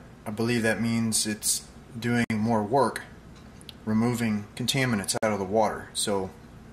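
At 2.24 s and 5.18 s, a gap at a join of encoded pieces opens silences of about 58 and 51 ms. Untrimmed encoder delay and padding sit between separately encoded pieces. Unlike a dropout, the sound resumes exactly where it stopped.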